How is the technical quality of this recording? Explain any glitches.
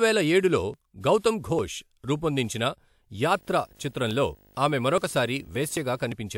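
The recording has two kinds of fault in this speech clip: codec pre-echo early on, and display interference through the second half.

Pre-echo occurs at 1.01 to 1.04 s, spreading about 30 ms, and at 1.18 to 1.24 s, about 58 ms. The transform codec spread its quantisation noise across a block, so hiss leaks into the quiet moment before each sharp attack, which then sounds smeared. Unlike ordinary noise or a click, it arrives just ahead of the onset, not on or after it.

Video or display buzz runs from 3.25 s to 6.04 s. A screen or video cable coupled into the audio, giving a 50 Hz buzz at the field rate with hash above it and a 15.6 kHz line-rate whistle, around 35 dB below the speech. That high whistle and the hash set it apart from plain mains hum.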